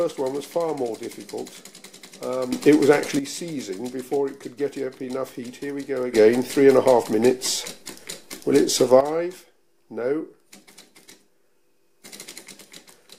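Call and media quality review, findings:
Sudden gain jump: level and noise floor step up together, about 10 dB at 2.53–3.19 s and about 11 dB at 6.14–9.01 s; likely unramped digital gain change.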